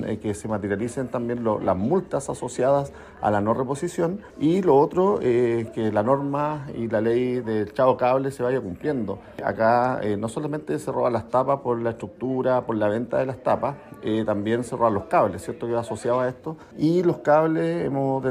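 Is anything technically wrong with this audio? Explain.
No, nothing technically wrong can be heard in this audio. No working path is listed beyond the recording itself, so there is nothing further to single out.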